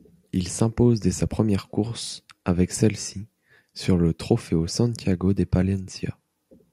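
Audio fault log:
2.07–2.09 s, repeated buffer: a single block of about 21 ms of the speech plays a second time straight after itself, because fresh audio failed to reach the output in time and the device reissued what it already held. The block length fits a 1024-sample buffer. With one extra play the result is a brief stutter with a hard seam at each join. On a waveform the same 21 ms shape appears twice in a row, with a discontinuity at the boundaries. A spectrogram shows the identical slice copied side by side with thin vertical lines at the joins. Nothing appears to be missing from the audio.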